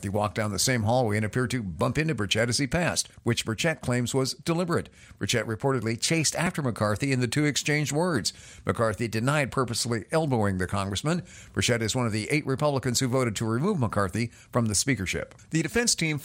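No technical faults can be heard anywhere in the speech recording; the signal stays stable and intact for its whole duration.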